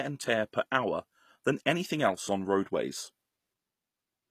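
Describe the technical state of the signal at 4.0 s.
At 4.0 s, as throughout, the treble sounds rebuilt rather than real, with s sounds gritty and metallic and nothing above 14.9 kHz. This likely points to HE-AAC compression at a low bitrate, around 24 kbps, where band replication copies lower bands upward. Unlike plain lowpass filtering, the top stays bright but mismatched.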